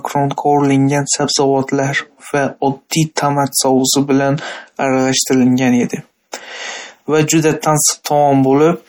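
Throughout the speech there is a plainly audible watery, swirling quality, with metallic chirps on s sounds and softened onsets. The likely cause is MP3 compression at a low bitrate, which fits something around 48 kbps. With so few bits, the encoder keeps only the frequency lines its hearing model ranks highest. Weaker lines drop in and out from frame to frame, producing the swirl. Content stops at 20.8 kHz.

At 3.16 s and again at 8.04 s, a brief hiss runs just ahead of a sharp onset, spreading about 17 ms and 13 ms respectively. This is pre-echo. The attack sits late within a transform block, so quantisation noise sized for the loud part is distributed across the whole block, including the quiet stretch before the attack. The onset itself sounds dulled and smeared rather than crisp.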